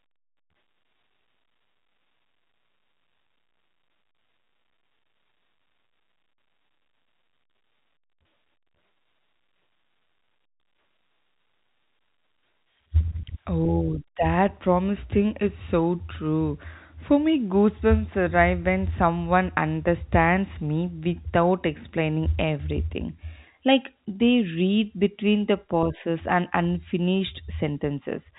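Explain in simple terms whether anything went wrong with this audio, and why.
Nothing went wrong here.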